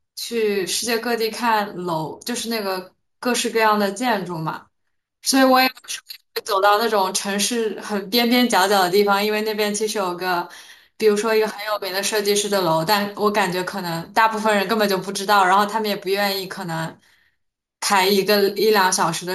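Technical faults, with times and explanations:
Throughout, imaging from sample-and-hold upsampling: a bright, metallic fizz rides on top of the speech, swelling and fading with its level. The lowest band of it lies between 8 and 16 kHz, about 15 dB below the signal. This points to audio at 16 kHz being raised to 48 kHz by repeating each sample with no smoothing filter. That leaves mirror copies of the spectrum around multiples of 16 kHz, and the lowest copy moves opposite to the pitch.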